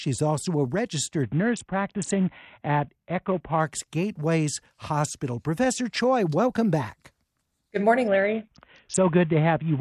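After "also a", from 1.23 to 3.6 s and again from 8.08 s to the end, a Bluetooth SBC bit pool drop dulls treble and adds grit, fitting roughly 54 kbps. Unlike a hands-free profile switch, the audio stays on SBC, with the bit pool falling from 28 to 5.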